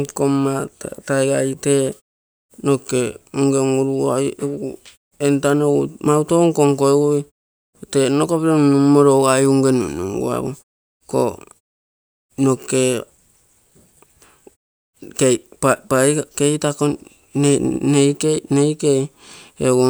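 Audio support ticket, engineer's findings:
No faults found in clip.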